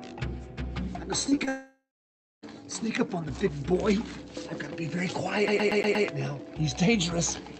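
Three brief smears at 1.29 to 1.33 s, 1.35 to 1.39 s and 1.45 to 1.49 s make the sound wobble. This is short concealed packet loss: each time, about 20 ms of audio arrived too late to be decoded. The receiver filled each gap by extending the preceding sound, following its pitch or substituting shaped noise, and then crossfaded back into the real signal.

Directly after the third smear, from 1.49 s to 2.44 s, the sound first continues as a fading buzz or hiss and then goes quiet, with about 0.62 s of that stretch silent. The audio returns at 2.44 s with nearly a second missing. This is a long network dropout: the likely cause is that no packets reached the receiver for that span, so its concealment faded out and then left nothing.

From 5.48 s to 6.07 s a fast, even stutter repeats the same 118 ms fragment five times, with a tiny mute at each jump back. It is the pattern of a CD stuck on one turn, where a scratch makes the laser return one track at the same point on every rotation. 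The call path's Opus codec cuts off everything above 8 kHz.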